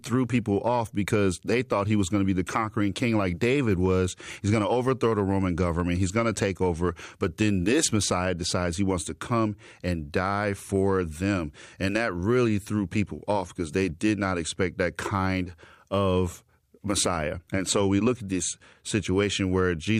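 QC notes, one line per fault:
Nothing to flag here, as the speech comes through without any problems worth noting.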